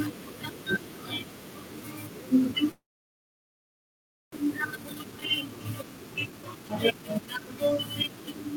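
From 2.71 to 4.36 s, likely a long network dropout: a brief fading buzz, then about 1.5 s of flat waveform, with about 1 s of speech lost. From 4.44 s to the end, a jitter buffer speed-up cuts repeated pitch periods, so speech runs 112% fast at unchanged pitch; the spectrogram shows steady harmonic spacing, squeezed syllables.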